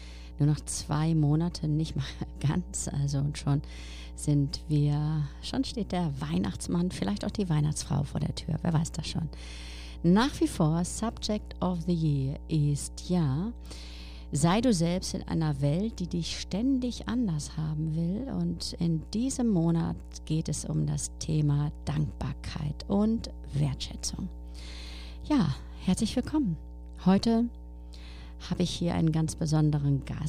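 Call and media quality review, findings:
Mains hum, present for the full clip. Steady low tone at 60 Hz with some low harmonics, sitting roughly 15 dB under the wanted audio. Probable component: analogue front end or cabling. Mechanism: ground loop or nearby transformer field coupling power-line current into the signal path before digitisation. Check grounding and shielding, or isolate the interface.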